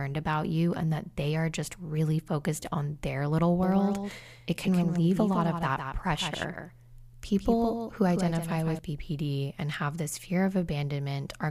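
A doubled audio track runs from 3.63 to 8.79 s. A second copy of the speech trails the original by roughly 150 ms, about 5 dB quieter. It is likely a slower capture path or misaligned edit. The echo is dry and full-band, and it begins and stops abruptly.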